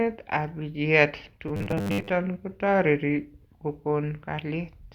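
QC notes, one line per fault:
1.48–2.12 s: robotic sound from repeated short buffers, a rigid 100 Hz metallic buzz, likely from a 10 ms block replayed in place of roughly half the speech.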